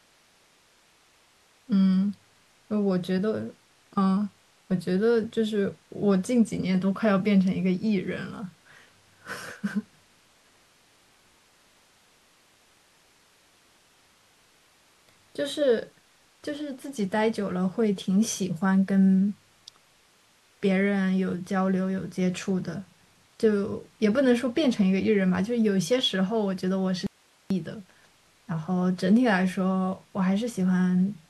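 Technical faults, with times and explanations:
27.07 to 27.50 s, audio dropout to a faint residue: the speech cuts out abruptly for about 0.44 s, leaving only hiss at a level far below the voice, then snaps back. Likely the signal feed broke briefly while the downstream path stayed live.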